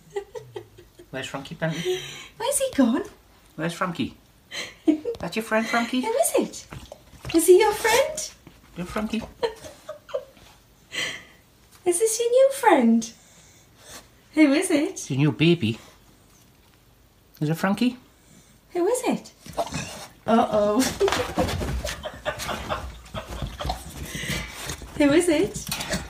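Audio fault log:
Nothing stood out on listening to this clip.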